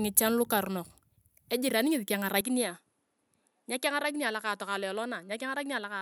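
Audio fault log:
2.41 s to end, input likely switched to a poorer device: right after "ngichan lukarunok ejiran ngesi" the sound turns duller, with nothing above 11.4 kHz, drops about 5 dB with no gap, and gains a faint new background noise. That new noise sets it apart from a simple filter change.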